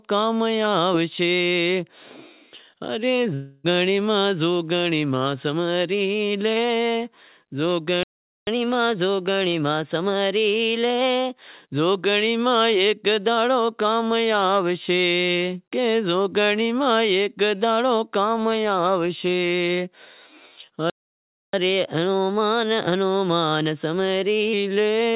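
From 3.34 to 3.66 s the speech turns into a smeared buzz that fades. The receiver is stretching the last sound it had. This is a long network dropout, likely from lost packets. About 0.3 s of speech never returns, and the audio resumes past the gap.

At 8.03 s the sound cuts off mid-flow and stays silent until 8.47 s, a gap of 0.44 s. This is a playback stall. The player likely ran dry or was blocked. A second stall runs from 20.90 to 21.53 s, lasting 0.64 s.

Each stall is followed by catch-up at higher speed. From 8.47 to 11.47 s, and again from 21.53 to 24.53 s, the speech runs at 1.1 times normal speed. The pitch rises by about a semitone and a half. It then settles back as the backlog clears. Through all of this, the G.711 mu-law call path keeps everything band-limited below 4 kHz.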